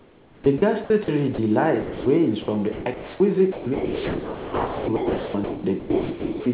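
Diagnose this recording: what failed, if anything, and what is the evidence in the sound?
The sender's voice activity detector, at the call-processing stage, was likely switching transmission on and off, so speech was chopped by the voice detector. From 0.00 to 1.08 s, 2.42 to 3.20 s and 3.52 to 6.46 s, the speech turns choppy as about 0.6 s, 0.46 s and 2.5 s are swapped for comfort noise.

Speech was also dropped by the voice detector when the same detector read quiet passages as background and stopped sending, at 1.34 to 1.38 s and 1.82 to 2.06 s. For 40 ms and then 240 ms, speech gives way to steady comfort noise, returning once the detector re-triggers.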